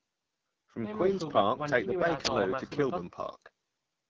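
From the start the speech carries the AMR wideband (HD Voice) codec's low-rate character. Voiced sounds turn rough and raspy because too few bits describe the vocal tract model and its pulse excitation. That sound fits AMR-WB's 8.85 kbit/s mode, one of its two lowest rates, and the damage is plainly audible.

From 2.25 to 2.27 s an uninitialised buffer produces a sudden, loud burst of digital noise. A playback block was sent out before real audio had been written into it, so leftover memory contents were heard as samples. The burst's length points to a 20 ms block.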